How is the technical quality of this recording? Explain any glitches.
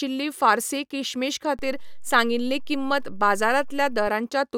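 The recording has one glitch, a DC step. From 1.59 s to 4.07 s the waveform's zero line jumps to an offset of about -30 dBFS, holds, then returns. Each sudden shift produces a low thump, at onset and release, while the speech carries on unchanged.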